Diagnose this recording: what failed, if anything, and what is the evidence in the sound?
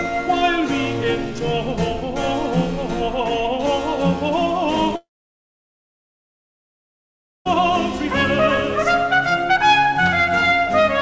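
The network stage failed: a long network dropout, most likely packet loss on the call link, cut the audio from 4.96 s to 7.47 s. About 2.5 s of audio never arrived. The receiver's concealment carried the last sound on as a short, fading buzz, then held near-silence for about 2.4 s. Audio resumed at 7.47 s with the lost stretch gone, still band-limited to 8 kHz by the G.722 call path.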